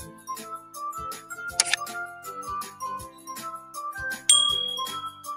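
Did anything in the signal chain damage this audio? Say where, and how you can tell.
Yes. The damage happens in call processing. A noise suppressor built for speech stayed on across the whole clip and treats steady parts of the sound as noise. You can hear the level rise and fall by roughly 10 dB as the suppressor keeps re-deciding what counts as noise. Sharp onsets pass through, but held material and tails sink, so the sound pumps and thins instead of sitting at a steady level.

The clearest evidence is four spots where the suppressor turns the sound down harder than elsewhere. These are 0.00 to 0.29 s (about 12 dB down), 0.58 to 0.75 s (about 10 dB), 3.07 to 3.28 s (about 9 dB) and 3.59 to 3.75 s (about 6 dB). Each dip lasts only a fraction of a second. The sustained or decaying content sags, while sudden events come through largely intact.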